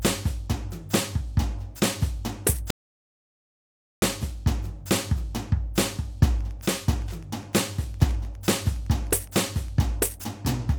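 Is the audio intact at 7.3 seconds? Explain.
No. From 6.39 to 9.82 s a faint, steady ticking about ten times a second sits under the music: Wi-Fi interference, a nearby radio's 102.4 ms beacon rectified by the audio circuit.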